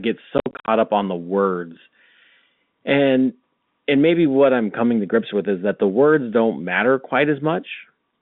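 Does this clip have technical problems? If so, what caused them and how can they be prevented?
Yes. Between 0.38 and 0.68 s the speech breaks up into a rapid stutter of dead gaps, losing 190 ms of sound across those 300 ms, the longest single hole being 60 ms. This is packet loss filled with silence: the receiver got nothing for those packets and inserted silence, so the gaps fall on packet boundaries, consistent with 10 ms packets. The narrowband G.711 telephone band around it sounds intact. A jitter buffer with packet loss concealment, plus forward error correction or a more reliable network path, would mask or prevent these holes.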